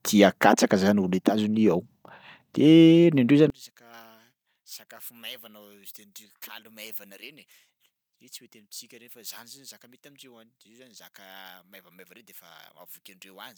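A speech recording in which, from 3.50 s to the end, the voice drops by about 25 dB to a faint residue. That collapse is what a mono sum sounds like when one channel is inverted: the centred voice cancels against itself, likely because one stereo channel's polarity was reversed.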